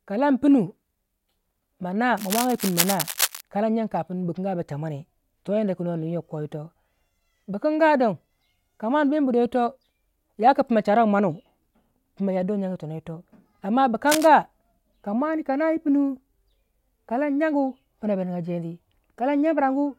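A worn cable or connector likely shifting causes cable scratch noise in this speech, dense scratchy bursts only slightly below the voice, from 2.16 to 3.41 s and 14.06 to 14.28 s.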